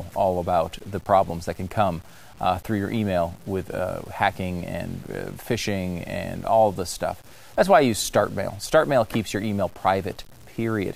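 From start to finish the speech carries a grainy, fizzy distortion that rides along with the voice rather than sitting underneath it as steady hiss. That's the signature of low bit depth without dither, likely from 8-bit samples truncated rather than rounded. Because the error tracks the signal, it gets grittier as the speech gets quieter, and the softest tails drop to silence or sputter. The grain sits roughly 30 dB below the speech level.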